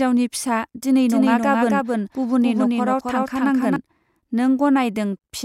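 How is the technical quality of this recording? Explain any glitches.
The recording has one clear glitch, a doubled audio track. From 1.08 s to 3.76 s, just after "फिसा दिनै", the speech is heard twice: a second, equally loud copy trails roughly a third of a second behind, clean and dry, cutting in and out abruptly. The likely cause is the same signal reaching the mix a second time through a slower path.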